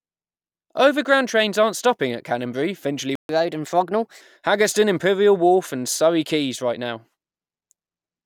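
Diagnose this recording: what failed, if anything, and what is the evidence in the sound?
At the playback stage, the speech cuts out from 3.15 to 3.29 s, a playback stall of about 0.14 s, most likely the player starving for data or its thread blocking. A waveform shows a flat gap, and a spectrogram shows a blank vertical band across all frequencies.

Right after the gap, from 3.29 to 4.21 s, comes catch-up at higher speed. The player resamples its backlog at 1.15 times normal speed, so pitch rises by roughly two semitones. On a spectrogram, harmonics shift upward and syllables compress, then drop back to normal spacing.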